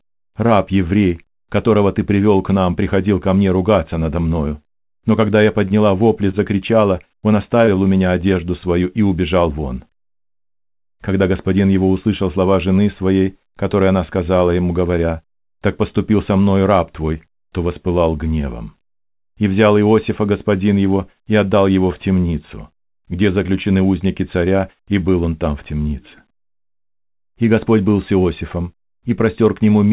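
At 5.68 s, right after "когда я", and again at 6.31 s, the speech hangs for about 20 ms in a short stall from a late packet. The jitter buffer ran dry, so the last sound was stretched until the data arrived. Nothing is lost, but each spot is briefly held with a faint buzz.

At 7.65 s, just before "у меня одежду свою", about 20 ms of audio never arrived. This short concealed packet loss was bridged by extending the preceding sound, leaving a quick smear before the real signal resumes. Throughout, the audio stops at 4 kHz, which fits a narrowband telephone codec such as G.711.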